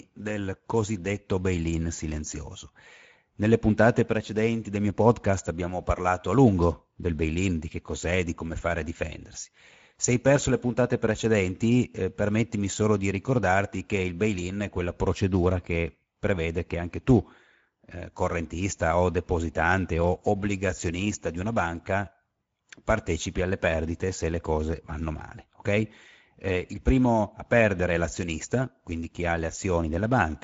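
From start to finish, the speech carries Speex codec damage, and it is plainly audible. Speex is a CELP coder. It rebuilds speech from a filter model and a coded excitation signal. Here the excitation gets too few bits, so the speech sounds rough, grainy and somewhat hoarse. The damage points to a bitrate near 16.8 kbps. Nothing sounds above 7.7 kHz, so the top end is dull.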